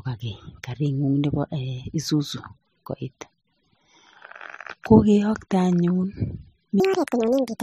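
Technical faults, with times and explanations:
6.8 s to 7.63 s, section at the wrong speed: The final stretch plays 1.81 times faster than it was recorded. Speed and pitch rise together, so the speech turns hurried and high, roughly ten semitones up. The likely cause is playback against the wrong clock.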